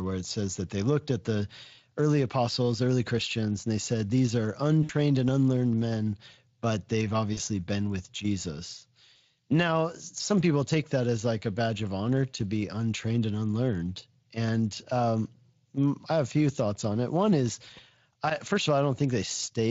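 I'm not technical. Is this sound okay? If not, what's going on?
No. The call briefly lost bits of audio in transit, which is VoIP packet loss concealed by the speech codec: the decoder guessed at the missing pieces from what came just before. You hear a short buzzy, smeared blur at 4.83 s (about 60 ms, right before "and unlearned men but") and at 7.33 s (about 40 ms, between "unlearned men but they've" and "been with").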